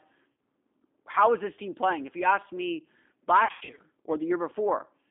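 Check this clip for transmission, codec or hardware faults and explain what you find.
Two problems turn up, one constant and one intermittent.

G.729 codec throughout: the speech sits in a narrow 250 Hz to 3.6 kHz band and sounds rough and synthetic, which fits an 8 kbit/s G.729 stream rebuilding it from a filter and a few pulses.

VoIP packet loss concealed by the speech codec, at 0.32–0.37 s and again at 3.45–3.80 s: the decoder fills the gaps by stretching its last sound into a fading buzz. The second patch is worse. About 220 ms is missing in bursts of up to 100 ms, so the voice stays weak and smeared for a moment afterwards.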